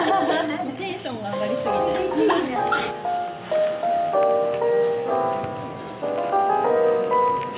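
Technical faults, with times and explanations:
Throughout, gain pumping: the level swells in pauses and ducks roughly 5 dB under loud sounds, likely a fast limiter reining in excessive gain.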